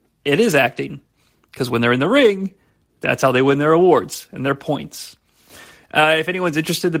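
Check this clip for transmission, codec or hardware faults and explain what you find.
No transmission, codec or hardware faults are audible anywhere in the speech.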